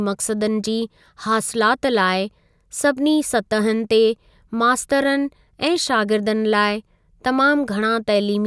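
No technical faults are audible anywhere in this recording.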